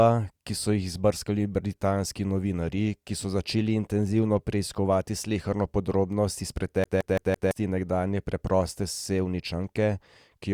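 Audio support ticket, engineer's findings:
CD stuck on one turn, 6.84–7.51 s: same 168 ms of speech repeats four times, brief mute per jump. Disc scratch; laser skips back one track.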